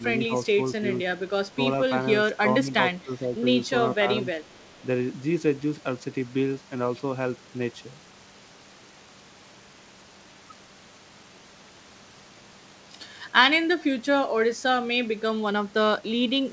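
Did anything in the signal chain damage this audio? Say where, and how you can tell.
Yes. The speech dips briefly four times early on: at 1.48 to 1.58 s and 2.64 to 2.78 s by around 5 dB, more deeply at 2.98 to 3.42 s by around 10 dB, and again at 4.00 to 4.27 s. These brief ducks point to call processing, likely speech suppressed in double talk. The echo canceller, hearing both ends at once, mistook this talker for loudspeaker echo and turned it down. The band stops at 8 kHz, consistent with a G.722 wideband call codec.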